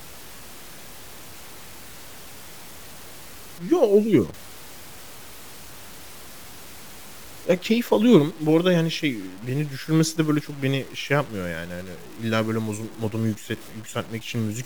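From start to finish the speech carries a grainy, rasping distortion that rises and falls with the voice itself. Quiet syllables and word tails turn gritty, and the softest decays sputter or cut abruptly to silence. The likely cause is low bit depth without dither: the audio was truncated to about 7 bits, leaving error roughly 20 dB below the speech. On a waveform, quiet passages show visible staircase steps. A spectrogram shows broadband hash tracking each phrase instead of a steady noise floor.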